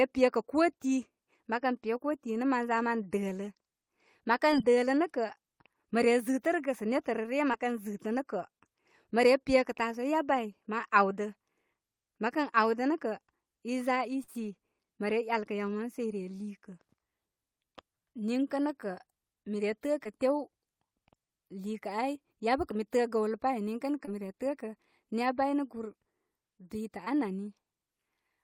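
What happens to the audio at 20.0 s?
A short concealed packet loss runs from 20.04 to 20.07 s. 20 ms of the speech never reached the decoder in time, so the receiver extended the preceding sound for 13 ms and blended back into the real audio, leaving a brief smear or wobble.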